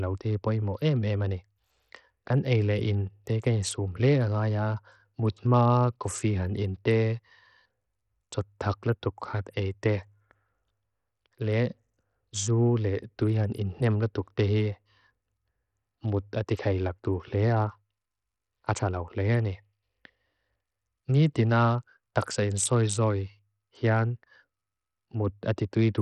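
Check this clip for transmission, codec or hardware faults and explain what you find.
There's one problem, and it runs the whole length of the speech: heavy Bluetooth SBC compression damage. From start to finish the treble keeps dropping out and flickering back, and a gritty grain sits on top of everything. That's likely the SBC codec running starved, which fits a bitrate down around 64 kbps. SBC chops the signal into a handful of wide bands and hands out bits crudely, so the quiet top bands get little or nothing and the rest are quantised coarsely. The grit and the aliasing come from that.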